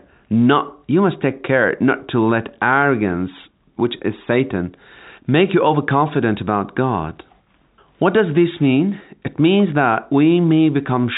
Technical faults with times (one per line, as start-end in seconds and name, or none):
none